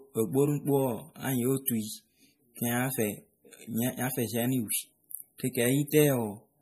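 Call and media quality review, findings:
Watery, swirling texture and dulled top end across the whole speech clip, nothing above 15.3 kHz. Likely MP3 compression at a low bitrate, consistent with about 40 kbps: weak frequency lines zeroed and flickering between frames, treble cut at a fixed limit.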